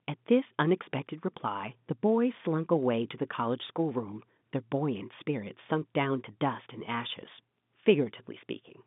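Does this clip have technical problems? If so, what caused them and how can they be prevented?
No, there are no technical problems to hear in this speech clip. It carries the sound of G.711 telephone coding, with the audio confined to a telephone band of roughly 150 Hz to 3.6 kHz.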